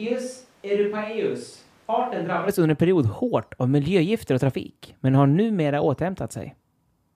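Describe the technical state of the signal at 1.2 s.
At 1.2 s the speech sounds roomy and hollow, with less bass, because it is likely picked up by a distant microphone instead of the close one. This switch to a distant microphone is already under way when the clip begins and lasts until 2.47 s, just before "under en period hårt". The level is about 10 dB lower, with room noise about 35 dB below the speech. Unlike added reverb or a muffling filter, it ends with a sudden return to close, full-bodied sound.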